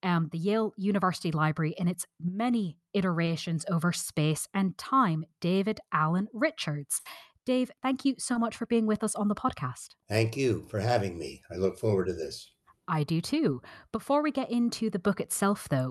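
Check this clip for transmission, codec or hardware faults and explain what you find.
The clip shows packet loss in transmission: three short concealed gaps and one longer burst. Everything sits under a cutoff near 12 kHz, which fits the call codec's coding bandwidth.

Short concealed packet loss occurs at 3.25–3.29 s, 8.33–8.37 s and 13.51–13.55 s. Each time, about 20 ms of audio failed to arrive, and the receiver patched the hole by extending the preceding sound before crossfading back. It is heard as a quick smear or wobble. On a spectrogram it shows as a thin column where harmonics run flat or turn smooth and noise-like. The waveform shows a slightly too-regular stretch.

A burst of packet loss runs from 6.99 to 7.07 s. About 60 ms of consecutive audio went missing, so the concealment held the last sound and faded it over the gap, producing a brief sustained buzz or decaying hiss before the audio jumps forward past the lost portion. 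A spectrogram shows frozen, dimming harmonics across that span. The waveform has an envelope that tapers and then resumes abruptly.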